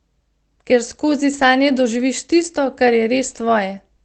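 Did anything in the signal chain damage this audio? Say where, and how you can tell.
Yes, at the network stage: lost packets rebuilt from error correction at 1.33 s, just before "sanje doživiš", and at 2.41 s, just after "skozi sanje doživiš". The decoder played a low-bitrate copy carried in the next packet, so there is no gap, but each 20 ms patch sounds rougher and noisier.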